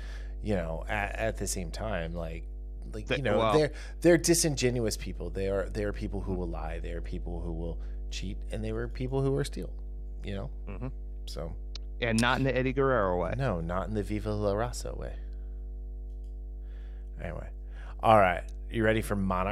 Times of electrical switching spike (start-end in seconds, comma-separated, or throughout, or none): none